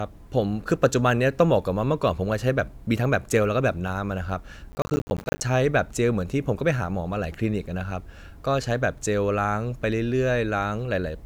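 Processor overload crackle runs from 4.72 to 5.41 s. The processor falls behind on its small audio buffers, which sound to be around 10 ms each, and dozens miss their deadline in a row. Each one drops to a hard-edged gap of silence, so the speech is torn by a gritty crackle until the load eases.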